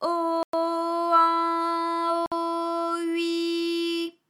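At 0.43 s and 2.26 s the sound drops to dead silence for 104 ms and 56 ms, then resumes, likely a Bluetooth stall as the headphone buffer ran dry. Both show as flat waveform gaps and blank spectrogram columns.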